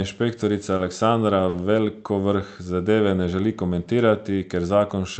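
Short concealed packet loss at 0.77–0.81 s and 1.49–1.55 s: about 20 ms and 40 ms of audio never arrived, so the receiver extended the preceding sound, heard as a brief smear, visible as smoothed, repeated spectrogram patterns.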